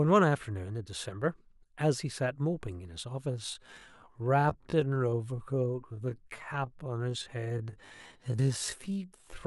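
From 3.26 s to the end, the speech abruptly slows to about 0.61 times its earlier pace while the pitch stays put, and the stretched part drags. This is a time-stretched section, most likely from software lengthening that stretch of audio to fill a longer slot: it keeps the pitch unchanged by repeating short overlapping slices.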